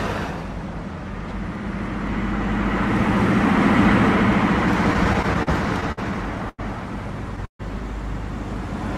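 From 4.93 to 5.99 s there are repeated stalls (stutter): the jitter buffer ran dry eight times as packets arrived late, and each time the last sound was held on, 159 ms in all, the longest hold 54 ms. The repeated catches across about 15% of that second, with nothing lost, make the audio drag and stutter rather than drop out once.

At 6.49 to 6.60 s comes a single short stall from a late packet. One packet missed its slot, the delay grew by 91 ms, and the receiver stretched the last sound for those 91 ms before carrying on from the same point. It is one isolated hold, not a string of them.

From 7.45 to 7.61 s the audio freezes: the last sound is continued and fades away, leaving 100 ms of silence within a 140 ms gap, after which the audio resumes where it stopped with nothing missing. This is likely a call audio freeze, with packets held up in transit and the delay growing by 140 ms. Unlike the short stall, the fill here dies out into silence.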